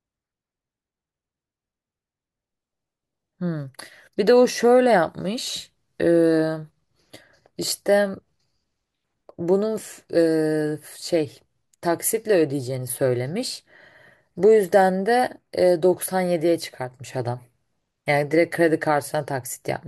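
Nothing goes wrong anywhere in this recording, so there's no technical fault to point to at any moment.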